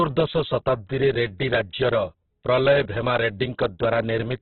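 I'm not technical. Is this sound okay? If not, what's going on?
No, it isn't quite right. From start to finish the speech sounds muffled and rough, like it's coming through an old phone line. Nothing above about 4.4 kHz is left, so the crisp top end is gone, and what remains has a grainy, noisy texture. That's very likely Opus compression squeezed down hard: with so little room to work with, the encoder discards the upper range and fills in the gaps with noise.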